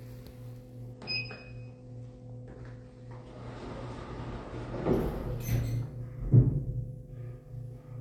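From 0.93 to 4.93 s the everyday sound abruptly loses its treble, with nothing above 9 kHz and coarser codec artefacts, then snaps back without any gap. This is an adaptive stream at a lower bitrate, consistent with a switch from about 96 to 32 kbit/s AAC.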